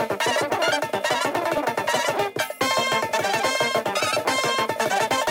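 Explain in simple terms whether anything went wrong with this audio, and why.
A wrong sample rate runs through the whole clip. Everything plays three times too fast and about 19 semitones too high, which fits 16 kHz audio played at 48 kHz.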